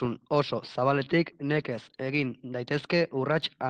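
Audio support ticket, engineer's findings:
Clock drift between sender and receiver, whole clip: sender clock runs slow, roughly 1.5% behind receiver. Jitter buffer drains steadily instead of wandering, so the speech timing slips one way only. Unlike random network jitter, the error accumulates rather than averaging out.

Repeated timing corrections, 0.94–3.56 s: receiver repeats short fragments to cover the slow sender, stretching playback to about 98% speed and adding around 50 ms in total. Unlike packet-loss concealment, all edits lengthen and none drop audio.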